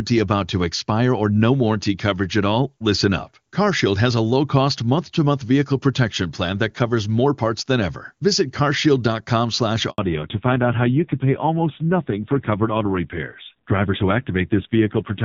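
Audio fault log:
9.90–9.98 s, handover gap: the call switched networks and no speech frames arrived. The sound cuts out for 80 ms, and that stretch is lost.
9.98 s to end, fallback to narrowband: the call dropped from HD Voice to a narrowband codec. Nothing above 4 kHz remains. The speech turns dull and rough, which fits a low narrowband rate.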